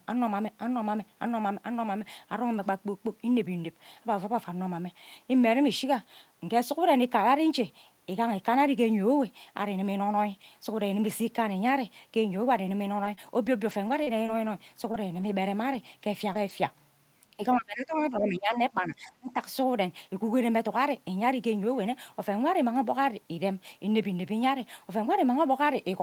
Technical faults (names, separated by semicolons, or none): scattered short gaps; speech suppressed in double talk